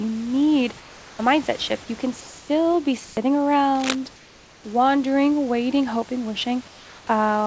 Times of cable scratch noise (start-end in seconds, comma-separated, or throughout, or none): 3.75-3.95